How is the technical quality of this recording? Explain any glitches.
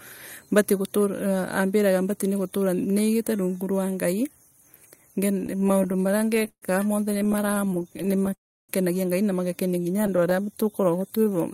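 The recording has clear network-playback faults in its second half: three bursts of stuttering, a short freeze, and a stretch of slowed speech near the end.

Repeated stalls (stutter) occur from 5.41 to 6.64 s, from 7.14 to 8.31 s, and from 9.97 to 10.33 s, just after "na magakenia". Packets arrived late or more slowly than they were played, so the jitter buffer kept running dry. The receiver held the last sound over each gap until new data came. The first burst has 23 gaps covering 364 ms, about 30% of that span, with the longest at 140 ms. The second has 23 shorter gaps, none over 15 ms, filling 240 ms. The third has 6 tiny gaps. No speech is lost, but it lurches and drags in rapid hitches. That rapid, repeated hitching is what separates it from a single freeze.

A call audio freeze runs from 8.34 to 8.71 s, immediately after the second stutter. The speech stops dead for about 350 ms, of which 320 ms is silence, then carries on exactly where it left off. 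Unlike the stutter, this is one continuous halt rather than many small catches. The likely cause is packets held up in transit long enough for the jitter buffer to empty completely, which pushes everything after it about 350 ms later.

A jitter buffer slow-down covers 10.10 to 11.38 s, overlapping the tail of the last stutter. To rebuild its reserve, the receiver repeated single pitch cycles and slivers of pauses many times, adding 165 ms. The speech plays at about 88% speed with the pitch unchanged, so sounds are drawn out. This stretching is smooth and continuous, with none of the stop-start breaks of a stall or freeze.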